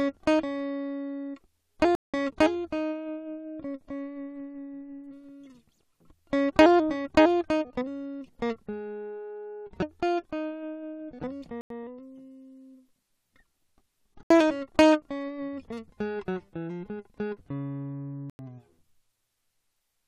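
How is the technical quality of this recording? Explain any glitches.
The recording has four dropouts, each a block of digital silence. At 1.95, 11.61, 14.23 and 18.30 s the output went unfilled and the music dropped to silence for about 186, 93, 73 and 93 ms. The first, second and fourth lengths fit 8192- and 4096-sample buffers. Each dropout is a clear hole, cutting out and back abruptly with no fade.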